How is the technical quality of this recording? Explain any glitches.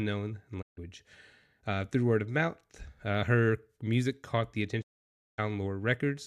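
The speech is interrupted twice by a digital broadcast dropout. The sound fades to silence within about 20 ms at 0.61–0.79 s and again, for longer, at 4.81–5.40 s, just after "her music caught the". Each time, the receiver muted while frames were missing or corrupt, so that stretch of programme is gone.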